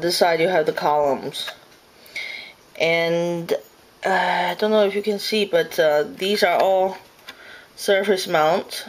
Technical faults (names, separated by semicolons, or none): none